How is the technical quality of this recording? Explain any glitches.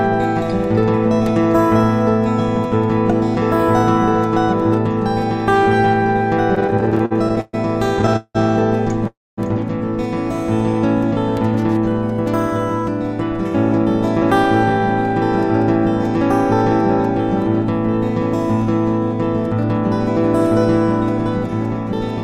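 The recording has two bursts of stutter and one short freeze, all clustered between 6.55 and 9.39 s.

Repeated stalls (stutter), from 6.55 to 7.55 s and again from 7.99 to 8.37 s: packets arrived late, so the jitter buffer kept running dry and the receiver stretched the last sound to cover each wait. The first burst holds about 14 brief catches, the longest 128 ms. The second has 5, one lasting 181 ms, filling over half that span. Nothing drops out, but the audio drags and hiccups.

Call audio freeze, at 9.07 to 9.39 s: the sound halts for about 300 ms, a brief carried-over tail followed by roughly 240 ms of silence, then resumes exactly where it stopped. Packets were likely held up in transit, adding delay rather than removing any audio.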